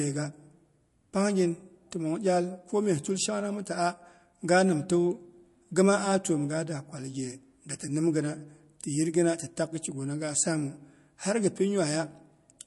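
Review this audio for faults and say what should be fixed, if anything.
Throughout the speech, the treble stops dead at 11.3 kHz and s sounds swirl and chirp, likely MP3 compression at a bitrate near 48 kbps. Unlike a plain low-pass cut, the remaining band turns watery as weak components flicker on and off. To prevent it, encode from the original at a higher bitrate or keep a lossless copy.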